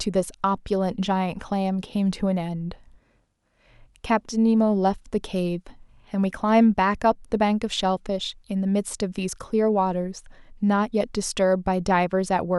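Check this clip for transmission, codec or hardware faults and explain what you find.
No transmission, codec or hardware faults turn up in this speech clip.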